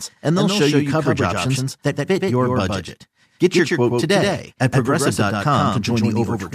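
Throughout, there's a doubled audio track: a second full-band copy trails about 150 ms behind, a few dB quieter, with no room decay, likely from a duplicate capture path.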